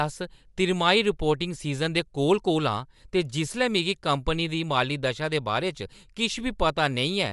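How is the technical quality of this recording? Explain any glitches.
The recording is clearly compromised throughout, with no clean spans. There is audible Bluetooth LC3 compression, likely from a low-bitrate link. Nothing comes through above about 11.6 kHz, and the speech has a grainy, breathy edge from noise-filled upper bands, which fits 10 ms frames around 48 kbps.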